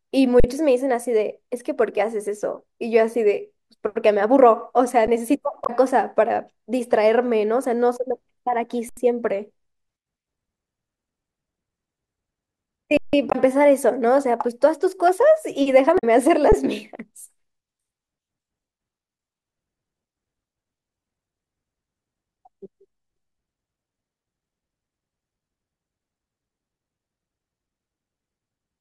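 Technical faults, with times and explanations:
0.40–0.44 s, 5.07 s, 8.89–8.97 s, 12.97–13.13 s and 16.52 s: underrun with held sample. The output buffer ran dry and the converter held its last value. The sound freezes flat for 40, 11, 80, 160 and 11 ms, then resumes where it stopped with nothing skipped, so the restarts are soft.
5.63–5.70 s, 13.29–13.35 s and 15.95–16.04 s: damaged data in a compressed stream. Corrupted bytes made the decoder misread frames and lose sync while it searched for the next frame header. Each event is a brief chirp or blip of about 60 to 90 ms.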